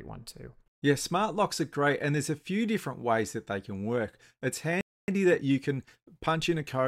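At 4.81 s the player most likely ran dry of buffered data or had its output thread held up, producing a playback stall: the speech stops mid-flow and the output falls silent for about 270 ms, until 5.08 s. The break is abrupt rather than a natural pause, cutting into the sound and leaving a clear gap before anything is heard again.

From 5.08 s to 6.82 s the player works off the backlog left by that gap with time-compressed catch-up. It removes small slices of the signal and cross-fades across the joins so the speech runs about 1.1 times faster without any change in pitch. The result is speech that sounds slightly rushed, lasting until the player is back in step near the end.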